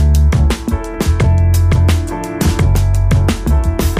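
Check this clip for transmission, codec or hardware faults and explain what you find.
There's one fault here: clock drift buffer slips. From 0.94 s to 3.94 s you get a click about once a second, roughly four in all. The likely cause is two devices running on separate clocks that disagree by a few hundred ppm. The buffer between them creeps toward empty or full, then drops or repeats a block of around 15 samples to catch up. Each correction lands as a short tick in the signal, repeating at that steady one-second rhythm.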